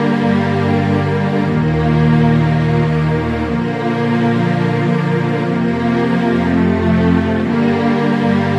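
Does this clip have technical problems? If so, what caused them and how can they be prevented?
No, there are no technical problems to point to in this clip. With nothing to trace back to a cause, no preventive step is needed.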